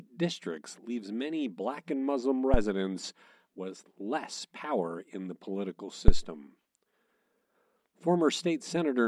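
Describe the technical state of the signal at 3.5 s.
At 3.5 s the speech signal is intact, with no audible fault at that moment.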